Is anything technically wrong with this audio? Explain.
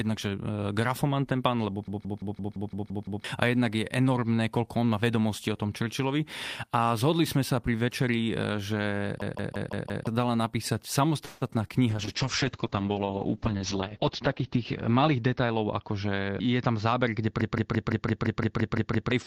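Yes, the speech is disrupted by several distinct faults.

System hang loop at 1.88 to 3.24 s, 9.22 to 10.07 s and 17.41 to 19.12 s. The system stalled while the audio hardware kept replaying its ring buffer, so a 170.67 ms slice repeats exactly (8, 5 and 10 times), a mechanical stutter at 5.86 Hz. The loop length fits an 8192-sample buffer. Roughly a second and a half, a second, and a second and a half of real audio are lost.

Call audio freeze from 11.25 to 11.58 s, just after "napísať napísať". The last sound is stretched into a fading buzz or hiss for about 160 ms before speech resumes where it stopped, with nothing skipped. The likely cause is delayed packets draining the jitter buffer.

Short concealed packet loss at 11.47 to 11.51 s and 11.68 to 11.71 s. About 20 ms of audio failed to reach the decoder each time. The receiver extrapolated roughly 16 ms from the preceding sound and blended it back in, leaving brief smears or wobbles.

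Call bitrate drop from 11.9 s to the end. The encoder was throttled from 32 to 8 kbps, bottoming out for 2.33 s. Bandwidth narrows from 20 kHz to 8 kHz, and the coarser coding makes the speech sound muffled and watery.

Jitter buffer speed-up from 14.23 to 16.12 s. To shed excess buffered delay, the receiver repeatedly removed pitch-period-sized slices, roughly 150 ms in total. Speech runs at 108% speed with unchanged pitch and sounds hurried.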